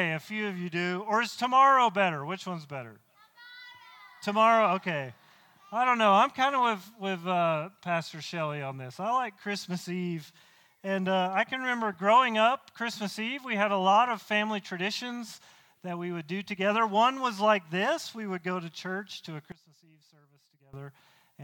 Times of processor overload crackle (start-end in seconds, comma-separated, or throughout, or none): none